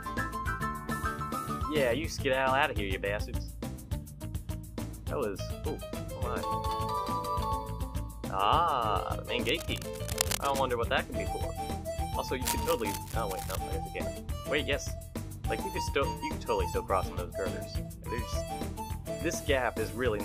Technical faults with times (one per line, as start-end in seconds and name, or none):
9.44-10.75 cable scratch noise
12.44-13.56 cable scratch noise